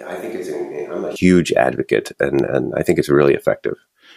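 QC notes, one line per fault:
0.00–1.16 s, switch to a distant microphone: The close microphone's signal is likely missing here, with a far-off pickup carrying the speech instead. The switch is already in effect when the clip opens. The voice sounds roomy and hollow with thinned-out bass, because the far microphone collects more reflected sound than direct sound. The level sits roughly 10 dB lower, and room noise is more noticeable, at around 35 dB below the speech. At 1.16 s the sound snaps back to close and full.
2.39 s, electrical switching spike: A brief electrical discharge nearby, likely from a switch, motor or static, was induced into the audio line as short arcing. It is heard as a sharp snap or tight cluster of clicks laid over the speech just before "and I think it's". The arc injects energy directly into the signal rather than through the microphone, so it cuts through with a hard, clicky edge and no room tail.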